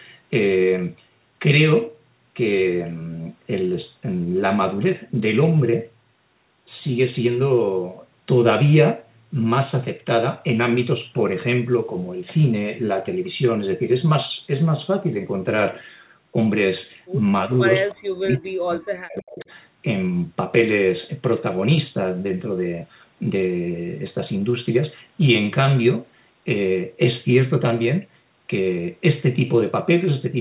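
Speech suppressed in double talk, 17.46 to 17.51 s: a brief dip of roughly 10 dB, likely the echo canceller turning down the talker while the far side also spoke. Echo leak, 17.9 to 17.95 s: a faint delayed copy of the voice about 318 ms late and about 25 dB below the speech, likely residual loudspeaker echo the canceller missed. Speech suppressed in double talk again, 17.93 to 19.49 s: the voice drops by as much as roughly 40 dB for about one and a half seconds, likely from the same canceller confusion. Echo leak, 19.4 to 19.45 s: another faint scrap, again 318 ms late, about 30 dB down, likely the same uncancelled echo. Throughout, the G.711 mu-law call path limits the sound to below 4 kHz.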